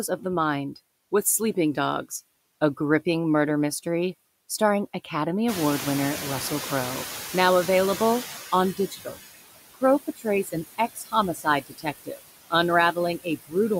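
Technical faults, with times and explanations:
Throughout: noise suppressor artifacts. The suppressor pulls down every band it judges to be steady noise, frame by frame, by about 16 dB. The background sinks in the gaps and swells back under the speech.
5.48–8.95 s: noise suppressor catching up. The room noise jumps by about 19 dB at around 5.5 s, and the suppressor's noise estimate trails it. The louder background first comes through with less reduction, then fades over roughly 3.5 s as the estimate adapts, reaching about 13 dB of reduction.
8.77–9.19 s, 10.07–10.26 s, 10.78–11.14 s, 11.34–12.20 s, 13.18–13.54 s: speech cut by the noise suppressor. With the background now about 12 dB below the speech, the suppressor mistakes quieter speech for noise and drops it by about 15 to 19 dB, for roughly a tenth to nearly half a second each time, so those parts sound swallowed and faint.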